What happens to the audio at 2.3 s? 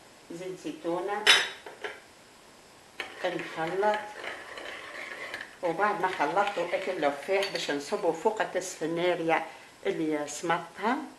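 Nothing goes wrong at 2.3 s; the audio plays through that moment intact, with no dropout, click or distortion.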